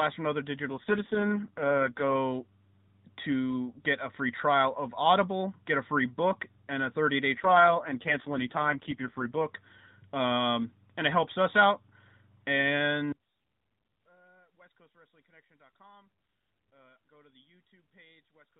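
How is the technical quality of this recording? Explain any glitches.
The recording has two kinds of fault on top of the narrowband phone-line sound, which fits AMR narrowband mobile coding with nothing above 4 kHz and only light codec roughness.

AMR rate drop, from 0.68 to 2.16 s and again from 7.38 to 9.46 s: the codec shifts to a much lower rate, which fits a fall from 12.2 to 4.75 kbps, as a weak link diverts bits to error protection. The bandwidth stays put and nothing drops out, but the speech turns buzzier and more synthetic, then recovers when the rate climbs back.

One channel inverted, from 13.12 s to the end: the level falls by about 32 dB and the centred speech nearly disappears, leaving only a faint residue. The likely cause is reversed polarity on one stereo channel, so when the two nearly identical channels are summed to mono, their shared content cancels and only the small difference between them survives.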